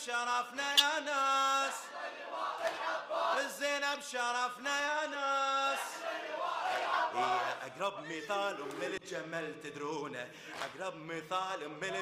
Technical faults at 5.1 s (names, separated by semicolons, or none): corrupt frame decoded